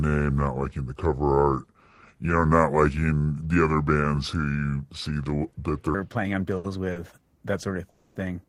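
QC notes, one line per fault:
0.00–5.94 s, section at the wrong speed: likely clocked at the wrong rate, playing at 0.728 times normal speed, so the speech drags and sits roughly five semitones low.
6.57–6.67 s and 6.92–6.99 s, short stall from a late packet: the jitter buffer ran empty and sound was held 70 ms after "playing on", then 40 ms before "that sort of".
7.90–8.19 s, call audio freeze: packets were likely delayed, so the receiver filled 260 ms with a fading buzz between "that sort of" and "yeah because of that", then resumed.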